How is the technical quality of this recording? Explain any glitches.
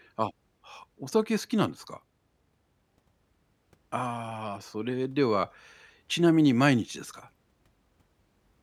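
No glitches turn up anywhere in this speech recording, so there's nothing technical here that needs explaining.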